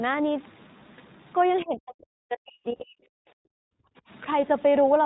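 A nearby DECT cordless phone's 10 ms radio bursts are rectified in the audio circuit, leaving a thin, steady 100 Hz buzz with many harmonics, roughly 35 dB below the speech, for the whole clip. Throughout, the speech passes through the iLBC codec in what sounds like its 20 ms frame mode. Nothing above 4 kHz survives, and the voice has a plainly audible rough, synthetic edge.

From 1.60 to 1.64 s, a faint scrap of the other side's voice leaks through, likely loudspeaker playback the echo canceller failed to remove, sitting around 30 dB under the talker.

From 1.64 to 2.97 s, speech is suppressed in double talk. With both sides apparently talking, the canceller pulls the talker down, by as much as 40 dB at the deepest, for about one and a half seconds in total.

Within that stretch, from 2.76 to 2.84 s, lost iLBC frames leave a 40 ms gap, which fits two frames. The decoder fills it by repeating the last pitch cycle, heard as a briefly held, buzzy vowel before the voice snaps back.

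From 3.25 to 3.52 s, the background is gated by the echo canceller. It clamps the microphone while the loudspeaker plays, so the room sound drops by about 40 dB for roughly 300 ms, then returns.

At 3.80 to 3.84 s, a further brief speech suppression, likely in double talk, cuts the talker by around 35 dB for about 40 ms.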